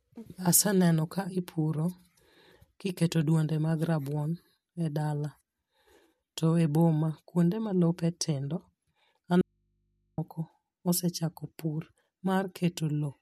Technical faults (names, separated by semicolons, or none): audio dropout to a faint residue